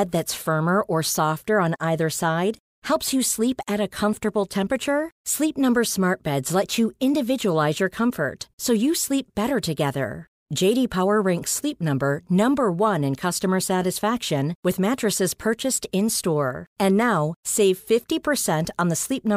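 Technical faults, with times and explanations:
Nothing in this speech recording stands out as a technical fault. There are no times to list and nothing to explain.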